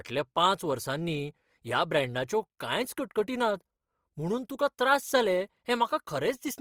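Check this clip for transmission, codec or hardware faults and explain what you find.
One codec fault runs through the whole clip. From start to finish the speech sounds rough, grainy and noisy, with the damage plainly audible though the full bandwidth reaches about 20.3 kHz. This is likely Opus compression in its music mode, filling starved bands with folded or noisy content, which fits a bitrate of around 24 kbps.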